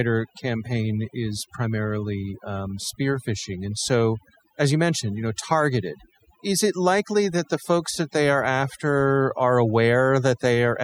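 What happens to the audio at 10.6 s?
At 10.6 s the audio is still under overdone noise removal, which runs through the whole clip. A noise reducer set far too strong is cutting frequency bands near its noise estimate, taking quiet parts of the speech with them: a background that drops and breaks up into twinkling specks.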